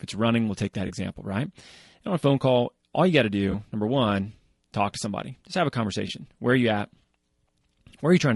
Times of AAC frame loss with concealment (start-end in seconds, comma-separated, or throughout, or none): 0.87-0.91, 3.51-3.54, 6.07-6.11, 7.61-7.64